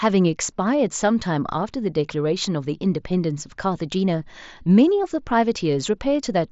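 Speech recording with no technical faults present.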